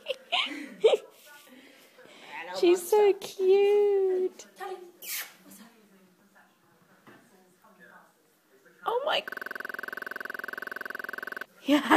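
A system hang loop runs from 9.29 s to 11.45 s. The same 46.44 ms slice of audio repeats exactly, some 47 times, giving a rapid mechanical stutter at 21.5 Hz. The machine froze while the sound hardware kept replaying its ring buffer, which fits a 2048-sample buffer.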